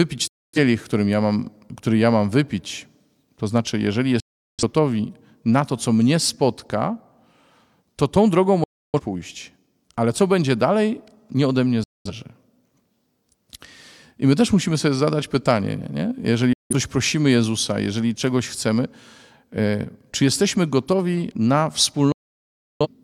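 Digital broadcast dropouts mute this speech at 0.27, 4.2, 8.64 (after "to tą drogą"), 11.84, 16.53 and 22.12 s. Each is a clean, near-instant cut to silence of 0.17 to 0.68 s, consistent with whole lost frames. Unlike analogue fading, there is no hiss or noise during the gaps.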